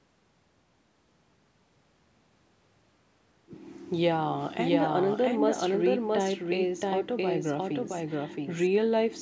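A doubled audio track runs from 4.17 s to 8.67 s in this speech recording: a second full-band copy, roughly as loud as the original, trails it by about 0.7 s with no decay or room colour, and it starts and stops abruptly. The likely cause is the audio being captured a second time through a slower path.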